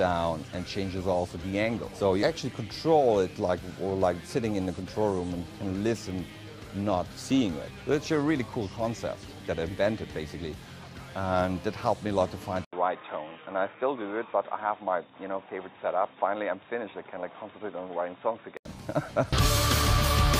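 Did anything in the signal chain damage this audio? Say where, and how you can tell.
Yes. Input switched to a poorer device, 12.65 to 18.65 s: an 80 ms gap, then nothing above 3.8 kHz and faint new noise, likely a driver-level microphone change.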